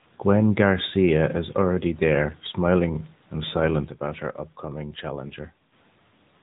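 Across the whole recording the speech sounds boxed-in and buzzy, with no brightness above about 4 kHz and a synthetic edge on voiced sounds. That is the AMR narrowband mobile codec at work: the audio is carried at 8 kHz sampling and rebuilt from a vocal-tract model driven by sparse pulses. The damage is plainly audible, and the degree of coarseness points to a mid-range mode, around 10.2 kbps.

Right after "there smiling and silent", at 3.88 s, the level suddenly drops by about 8 dB. The speech and the background fall together in a single step, with no fade, and stay lower until 5.72 s, when they return just as abruptly. This sudden gain jump is likely a digital gain setting applied instantly rather than ramped, so every part of the signal changes level at once.

Inside that quieter stretch, from 5.28 to 5.33 s, there is a brief dip or warble. The sound smears for a moment as if held, then resumes a little rough. 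These are lost AMR speech frames, and the length of the disturbance fits a single dropped 20 ms frame. The decoder filled the gap by repeating the previous pitch and vocal-tract settings at reduced gain, which produces the momentary smear rather than a clean cut.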